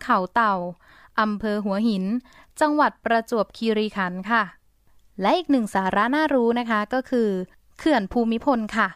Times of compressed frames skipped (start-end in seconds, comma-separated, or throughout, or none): none